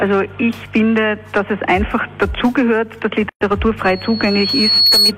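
At 3.29 to 3.41 s a 119 ms gap at a join of encoded pieces cuts the sound, where leftover encoder delay and padding sit between separately encoded pieces. The sound resumes exactly where it stopped, unlike a dropout that loses material. From 3.84 to 5.12 s a loudspeaker feedback squeal appears: a single 4.4 kHz tone swells over roughly a second to about 5 dB above the sound. Its steady pitch and self-sustaining growth distinguish it from an added test tone.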